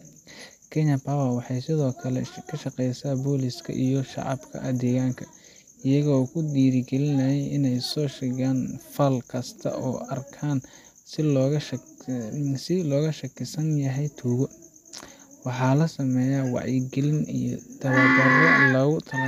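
Speech recording, with no technical faults to be heard.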